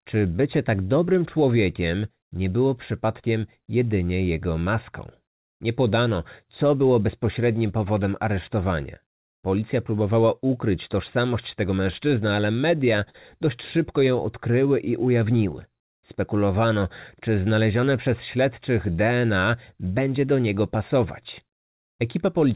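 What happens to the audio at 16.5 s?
A jitter buffer slow-down is under way, running from 13.76 s to 16.69 s and ending just before "czy znalezione przez śledczych". To rebuild its reserve, the receiver repeated single pitch periods and fragments of pauses, adding about 145 ms and bringing the speech to 95% speed. The sound is stretched and drawn out, but unlike a slowed playback or tape drag, the pitch does not drop.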